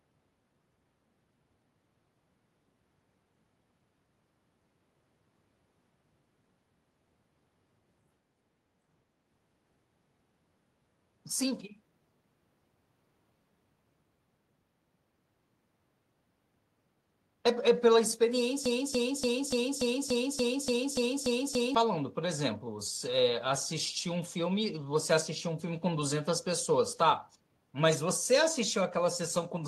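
From 18.66 s to 21.75 s the speech gets stuck in a broken-record loop. A fragment of about 0.29 s repeats exactly, back to back, eleven times. The likely cause is a stalled player or stream resending its last fragment. The speech due then is lost.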